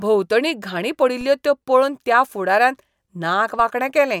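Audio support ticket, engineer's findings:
DC step at 1.21 s, just before "त्यो पळोवन त्या फुडाऱ्यान", and at 3.60 s: low thump, zero line jumps, then decays through a 20 Hz high-pass. Converter recalibration or offset input. Unlike a dropout, speech continues uninterrupted.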